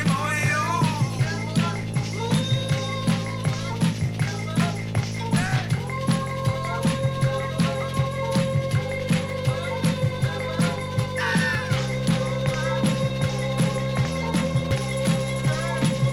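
At 9.3 s, 11.55 s and 14.71 s the audio skips straight ahead, losing roughly 20, 20 and 30 ms. This is likely a dropped buffer (overrun): samples were overwritten before being read, so the two sides join directly, with no silent gap as a dropout would leave.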